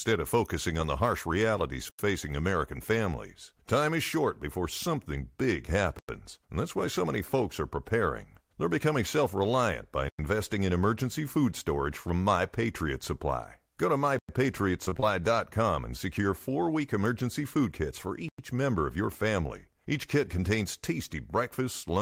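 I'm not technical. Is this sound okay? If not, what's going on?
No, not quite. There's a gap between chunks: the speech stops dead for a tenth of a second every four seconds, at 1.89, 5.99, 10.09, 14.19 and 18.29 s, for example right after "becoming self reliant by". Nothing is lost; it just stutters at each join.

There's also repeated packet loss (robotic sound) from 14.85 to 15.04 s. Bits keep dropping out and getting patched over, so it sounds briefly choppy, with pieces missing.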